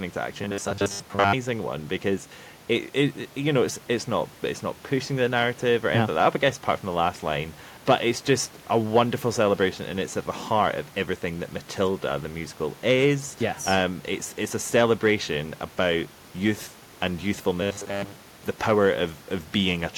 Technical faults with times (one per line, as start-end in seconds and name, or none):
0.42-1.34 robotic sound from repeated short buffers
17.62-18.40 robotic sound from repeated short buffers